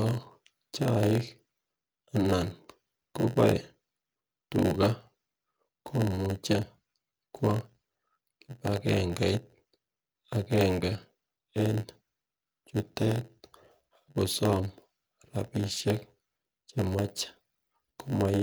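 From start to finish the speech carries a steady 91.9 Hz buzz and runs slow, at 0.919 times normal speed with timbre unchanged. This is a block size mismatch (padded): each block is written short and zero-filled, inserting a brief gap at every block.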